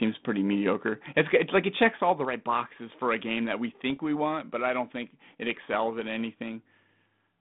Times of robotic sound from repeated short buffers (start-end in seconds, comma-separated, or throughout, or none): none